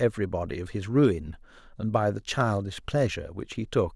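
Around 1.04 to 1.07 s there's a short burst of hard clipping: a speech peak pushes roughly 1 dB past what the stage can pass, so the waveform tops get sliced flat. Being so mild and brief, it comes across as a quick crackle rather than fuzz.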